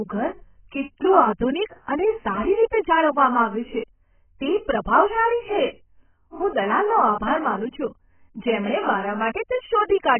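From start to finish the speech is dull, with no content above about 3.1 kHz and a swirling, warbly texture on vowels and sibilants. This is likely heavy AAC compression at a very low bitrate, near 10 kbps. On a spectrogram the energy stops at a flat ceiling.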